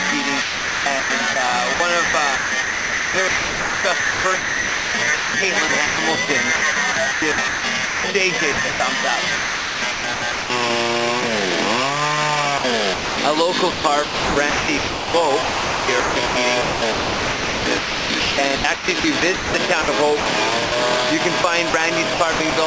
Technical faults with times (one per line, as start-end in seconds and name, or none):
0.42-5.98 sound chopped by the voice detector
6.56-8.80 sound chopped by the voice detector
9.36-10.50 sound chopped by the voice detector
12.58-13.18 sound chopped by the voice detector
13.72-20.72 sound chopped by the voice detector
21.42-22.52 sound chopped by the voice detector